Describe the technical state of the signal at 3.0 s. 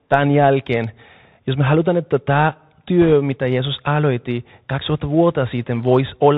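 Bit errors on a Bluetooth voice link hit from 3.02 to 3.13 s, right after "me halutaan että tämä". Flipped bits in the one-bit CVSD stream each move the waveform by one step, which grows with the speech level, and the decoder recovers quickly. So there are no loud clicks, just a brief rushing crackle. It fits an error rate of around 2 percent.

Under this, the Bluetooth CVSD headset codec runs through the whole clip, and its damage is plainly audible. The sound fits a 64 kbps CVSD stream, coding one up-or-down bit per sample. Nothing passes above 4 kHz. The adaptive step lags loud high sounds, so s sounds turn scratchy over a granular hiss.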